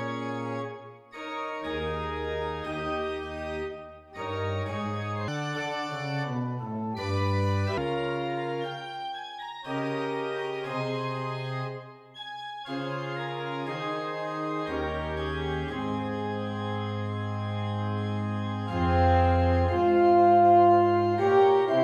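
From 5.28 to 7.78 s, a section at the wrong speed plays 1.42 times fast, likely from a clock mismatch. It sounds about seven semitones higher and hurried, and spectrogram harmonics step abruptly upward.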